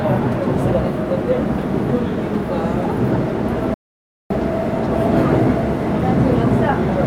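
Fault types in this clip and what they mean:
audio dropout to silence: from 3.74 to 4.30 s the sound stops dead into silence, likely a lost input link; waveform flatlines, spectrogram shows a blank vertical band.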